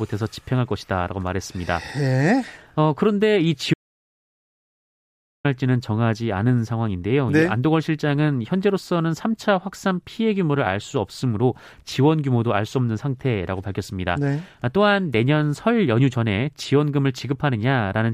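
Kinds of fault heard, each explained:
Audio dropout to silence: the input signal was likely lost, through a failed link, disconnected device or stray mute, while recording carried on writing silence. The speech cuts off abruptly at 3.74 s and returns mid-flow at 5.45 s, leaving about 1.7 seconds of dead silence with no room tone.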